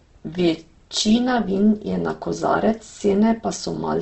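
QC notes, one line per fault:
Throughout, Opus compression: the speech sounds grainy, rough and noisy, with nothing above 8.2 kHz. The cause is likely Opus in its CELT music mode, filling starved bands with folded or noise content. The heavy damage fits a bitrate near 12 kbps.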